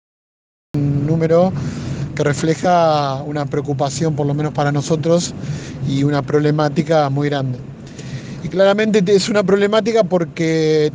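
Digital silence fills the first 0.74 s, then the sound bursts in mid-event with no attack or fade, a cut-off start where capture began late.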